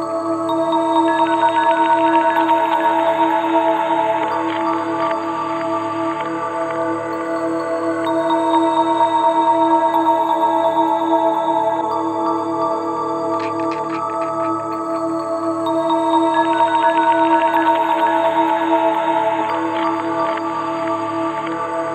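Nothing stood out as a technical problem on listening.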